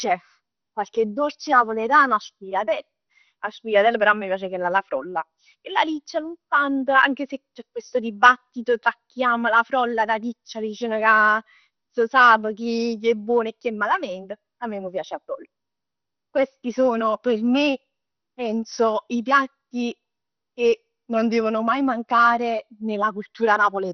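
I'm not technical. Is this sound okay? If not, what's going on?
No. Throughout the speech the sound is dull, with nothing above about 6.2 kHz, and it carries a gurgling, grainy roughness. This is MP2 compression, likely squeezed too hard. The format splits the sound into many frequency slices and, short of space, shuts off the top ones and roughly rounds the rest. A simple treble cut would just sound muffled but clean. Here the remaining slices flicker and bubble, like weak digital radio.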